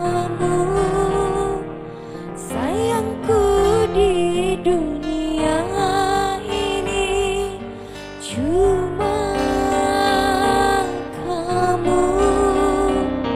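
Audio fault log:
Throughout: overlap-add ripple. The audio was split into windowed frames and rejoined with an overlap whose windows do not add up to a constant gain, so the level dips and recovers once per frame, by about 11 dB. The frames come around 300 times a second, which puts this swell and sag at an audible pitch-like rate. It is heard as a metallic buzz with extra tones around each note, laid over all the sound.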